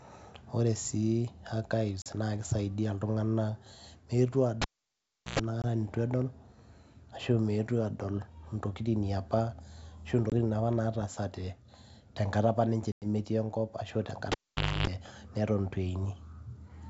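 At 2.02 s there's packet loss on an ADPCM call. A 40 ms hole, roughly a couple of packets, goes to silence. The decoder's predictor and step size lose track of the sender, so the speech comes back slightly distorted. It settles quickly.

From 4.62 to 5.39 s the cable is pulled and plugged in: a pop, about 0.73 s of near silence, then roughly 110 ms of 60 Hz buzz as the tip touches, and another pop on reconnection.

Single-packet dropouts follow at 5.62 and 10.30 s, each 20 ms, with the same slightly distorted, mistracked recovery. At 12.92 s a longer 100 ms gap, around five packets, leaves a hole before the speech returns slightly distorted.

From 14.32 to 14.87 s the cable is pulled and plugged in again. This time there's about 0.5 s unplugged and a longer stretch of 50 Hz hum, around 280 ms, between the pops.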